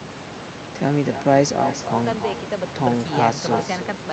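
Echo with no canceller, throughout: a far-end loudspeaker leaks into its microphone, returning the speech roughly a third of a second later, about 9 dB quieter.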